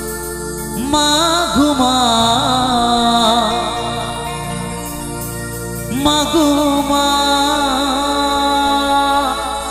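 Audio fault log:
Throughout: mains hum. A steady low tone at 60 Hz sits under the whole clip, with some low harmonics above it. It stays at roughly 20 dB below the signal. A ground loop or a nearby transformer is coupling the power line into the audio path.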